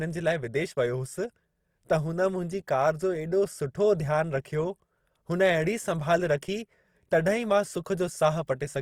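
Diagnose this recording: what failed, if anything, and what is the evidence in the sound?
Grainy, rough texture across the whole speech clip, with no missing bandwidth, points to the codec stage: likely Opus compression in music mode, around 24 kbps, noise-filling starved bands.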